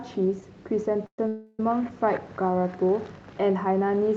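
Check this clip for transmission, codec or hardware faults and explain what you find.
Yes, there are two call audio freezes in this speech clip. Both are brief, and nothing is lost from the audio.

Call audio freeze, 1.06 to 1.19 s and 1.28 to 1.60 s: packets were likely delayed, so the jitter buffer emptied. The receiver then drew out the last sound as a fading buzz or hiss, with about 80 ms of silence in the first freeze. When the audio resumes, it picks up from where it stopped, now 117 ms and 424 ms later than it should be. On a spectrogram, each freeze shows as smeared, unchanging horizontal bands. On the waveform, each shows as a decaying envelope.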